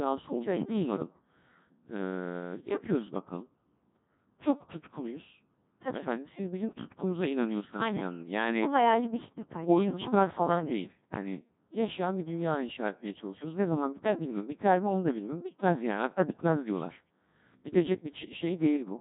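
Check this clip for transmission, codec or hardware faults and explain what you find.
One codec fault runs through the whole speech clip. Codec 2 vocoder: the speech is resynthesised from sine waves rather than coded as a waveform, giving robotic, buzzy tone, nothing above 3.8 kHz, and heavy damage fitting roughly 1.6 kbit/s. Unlike plain band-limiting, the timbre itself is synthetic.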